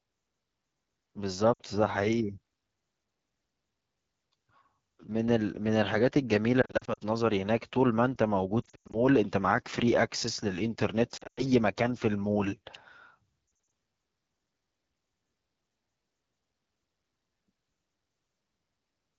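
Throughout, the AMR wideband (HD Voice) codec gives the speech a rough, raspy edge, which fits its low 8.85 kbit/s mode. At 1.54 to 1.61 s, 6.62 to 6.99 s, 8.62 to 9.00 s, 11.17 to 11.46 s and 13.47 to 13.71 s, lost AMR speech frames cause brief dips and warbles. The decoder repeats its last good settings at falling gain, so the sound smears and thins before recovering.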